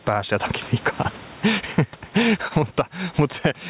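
All the way through there's gain pumping: the gain ducks by about 15 dB under each loud bit, squashing loud and soft parts closer together, most likely from gain set too hot with a fast limiter clamping down. Then from 2.48 to 2.53 s there's a short stall from a late packet: the jitter buffer ran dry, so the last sound gets held for about 29 ms before carrying on, with nothing lost.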